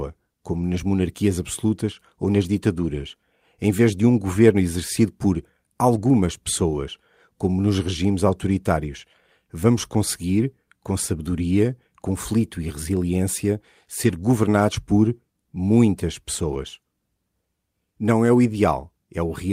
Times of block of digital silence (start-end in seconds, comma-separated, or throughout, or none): none